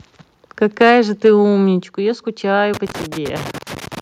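At 0.81 to 0.98 s the loudest syllable takes on a harsh, crackling edge. This is microphone overload: the input gain was likely set too high, pushing peaks about 4 dB past the converter's ceiling so that around a tenth of the samples have their tops sheared off. At 0.82 s the whole level, voice and background together, drops abruptly by about 2 dB. That is the microphone volume stepped down, likely the call software cutting the input gain in one step in reaction to that distorted peak. The same gritty edge returns from 1.25 to 1.30 s, likely overload again, with peaks about 2 dB over and roughly a sixth of samples clipped. Further sudden level drops follow at 1.83 s, about 6 dB, and at 2.85 s, about 3 dB, each likely another automatic step down in input volume. From 2.74 s to the end, an irregular scratching crackle chops the signal. This is loose connector crackle, a worn or dirty contact rapidly making and breaking as it moves.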